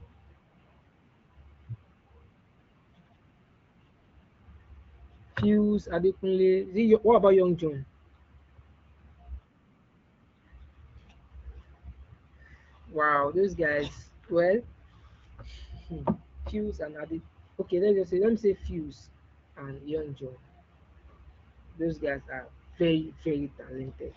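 Speech, with no technical faults audible anywhere.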